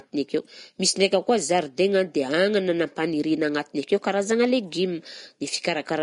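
Likely Vorbis compression, fitting a bitrate near 39 kbps, runs throughout: the speech stops at 10.6 kHz, its coarsely quantised treble grainy and hissy, attacks blurred.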